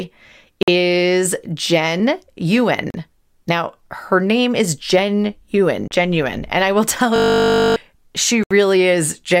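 The first gaps are most likely Bluetooth stalls: radio interference held back packets, the headphones' buffer emptied, and playback waited for the resent data. The speech drops to silence for 50 ms at 0.63 s, 38 ms at 2.90 s and 33 ms at 5.88 s, then resumes. Each one sounds like a brief, clean hole punched in the audio rather than a click or a fade.

At 7.16 s a system hang loop takes over until 7.76 s. The computer or its audio driver froze while the sound hardware kept replaying the same 20 ms stretch of its ring buffer, thirty times in a row. Because the piece is so short, the repeats merge into a steady buzz at 50 Hz. When the system recovers, roughly 0.7 s of speech is simply gone, so the voice jumps ahead.

A final, longer Bluetooth stall at 8.44 s silences the speech for 71 ms before playback catches up.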